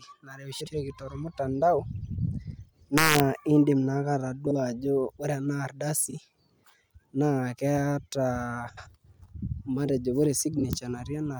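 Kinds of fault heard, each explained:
Frames out of order: neighbouring frame runs were decoded in swapped order, so six short stretches, such as just after "ore ena", play halves exchanged as a garbled flutter.
Integer overflow: a gain exceeded the integer limit and wrapped sign instead of limiting, producing violent cracks on loud peaks between 2.98 and 3.20 s.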